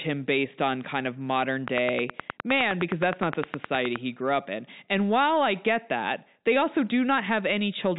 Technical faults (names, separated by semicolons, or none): train of clicks